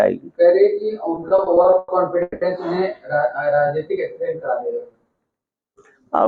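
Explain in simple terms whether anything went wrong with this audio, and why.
From 1.15 to 2.43 s the audio stutters and drags through about ten brief hitches. These are repeated stalls: data arrived late, so the gaps were papered over by stretching the last sound.

From 3.30 to 5.29 s it plays about 10% slower at the same pitch, adding roughly 0.2 s. This jitter buffer slow-down happened because the receiver repeated tiny bits of sound to rebuild its reserve.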